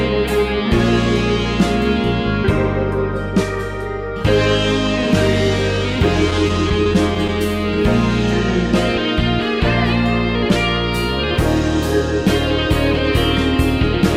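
Scattered short gaps run from 6.30 to 7.30 s: about seven brief holes, each around 10 ms or less, where packets went missing or arrived late. The receiver bridged each by extending the preceding sound, so the stretch carries small ticks and momentary smears.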